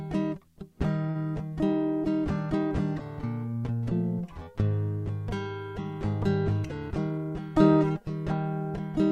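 A music clip with two jitter buffer problems. From 1.09 to 1.17 s there is a short stall from a late packet: the sound is held for about 57 ms until the delayed data arrives. Playback then resumes exactly where it left off, so unlike packet loss concealment nothing is skipped. From 6.88 to 7.32 s a jitter buffer speed-up trims short pitch-period slices to shed about 70 ms of backlog. The music runs at 112% speed and its tempo briefly rushes, but the pitch stays put, which separates this from a resampling or playback-rate error.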